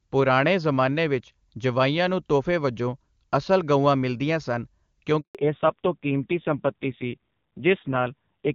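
At 5.21 s the speech cuts out in a handover gap. The call switched networks and no speech frames arrived for 140 ms. The sound fades within a few tens of milliseconds, stays silent until 5.35 s, and whatever was said there is lost.

From 5.35 s to the end, there is a fallback to narrowband. Before this, the clear HD Voice link can be heard. After it, nothing remains above 4 kHz. The speech turns dull and rough, which points to a low-rate AMR narrowband codec around 5.9 kbit/s.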